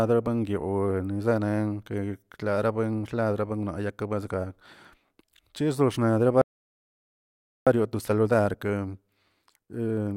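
At 6.42 s the speech cuts out in a playback stall. Silence lasts about 1.25 s, until 7.67 s. The player likely ran short of data. From 7.67 s to the end, time-compressed catch-up follows. The speech runs about 1.1 times fast at normal pitch, as small pieces are cut out and cross-faded.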